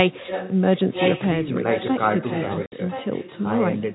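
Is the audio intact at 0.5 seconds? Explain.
No, at 0.5 s you're inside an echo leak running from 0.05 to 0.56 s. A delayed copy of the speech comes back about 1.02 s late and roughly 10 dB under it, likely from a far-end loudspeaker whose echo canceller let some through.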